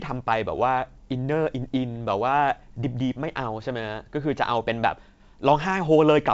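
Speech carried over G.722 wideband telephone coding at 64 kbit/s, band-limited with nothing above 7.7 kHz, and no fault is audible.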